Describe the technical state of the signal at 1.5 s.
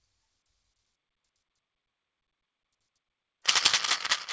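At 1.5 s the signal is intact, carrying only the ordinary coding texture of the G.722 call path, with nothing above 8 kHz.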